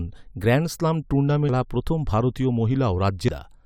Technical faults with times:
1.49 damaged data in a compressed stream
3.28 damaged data in a compressed stream

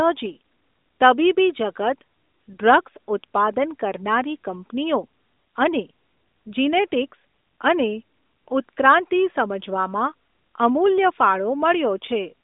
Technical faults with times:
none

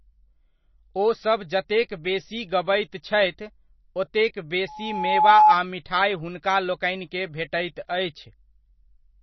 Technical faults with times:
0.00-9.22 MP3 compression
4.68-5.55 loudspeaker feedback squeal

